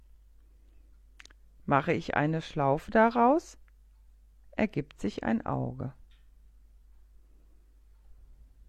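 No technical faults can be heard anywhere in this clip.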